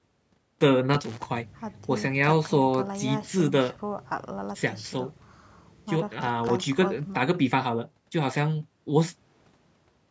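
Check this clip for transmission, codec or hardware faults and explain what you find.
Loose connector crackle appears twice in this speech, from 0.94 to 1.25 s and from 6.47 to 6.64 s. A worn contact makes and breaks as it shifts, chopping the signal into irregular bursts of scratchy crackle. The call's microphone processing, which leaves nothing above 8 kHz, is not a fault.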